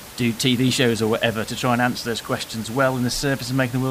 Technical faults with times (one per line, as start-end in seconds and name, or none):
none